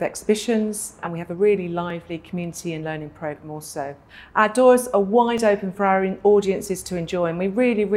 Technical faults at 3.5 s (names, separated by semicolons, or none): clock drift buffer slips